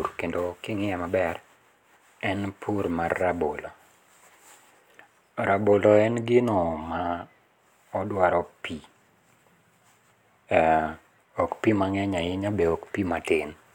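No technical faults can be heard anywhere in the speech. Nothing points to a problem in how it was captured, carried or played back.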